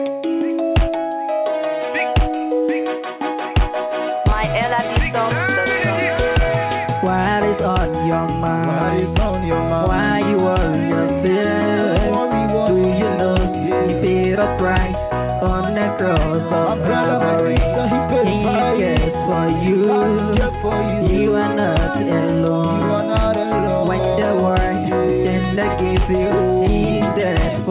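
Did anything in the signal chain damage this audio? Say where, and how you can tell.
No, nothing in the chain damaged it: the only marks left are the call path's band limit, with nothing above 4 kHz, and its usual coding noise, which fits a narrowband telephone codec such as G.711 working as intended.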